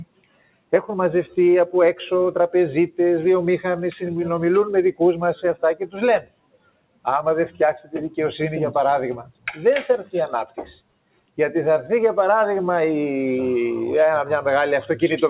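A speech-tuned noise suppressor applied to music or sounds runs throughout. It treats sustained, steady material as noise and pulls it down by up to roughly 20 dB, while sharper onsets slip through. The result pumps and thins, with held parts and decays sinking under attacks. On a waveform the envelope collapses just after each transient. A spectrogram shows sustained bands fading early, all confined below 4 kHz, as expected for a G.711 A-law call path.

Sound cut by the noise suppressor is heard at 0.05–0.73 s, 5.36–5.63 s, 5.81–5.97 s, 6.21–7.06 s, 9.23–9.53 s and 10.46–11.38 s. Drops reach about 21 dB in the longest stretches, about 19 dB at 5.36 s and about 16 dB at 5.81 s. Each sounds like the sound being swallowed or gated away. The waveform shows sudden hollowed-out troughs, and the spectrogram shows dimmed stretches there.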